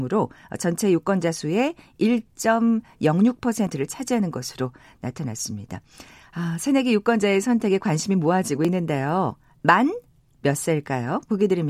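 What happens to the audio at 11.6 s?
Nothing goes wrong at 11.6 s; the speech runs on intact at that moment, with no dropout, click or distortion.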